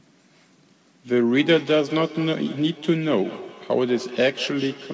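From 1.35 s right through to the end, there's feedback echo between two devices. It sounds like two devices in the same room sharing a call: one plays back what the other's mic sent, that mic hears it again, and neither echo canceller touches sound from the other box. So the speech comes back roughly every fifth of a second, thinner and ringier with each pass, peaking at about 15 dB below the direct speech. Everything sits under 8 kHz, which fits a G.722 call path.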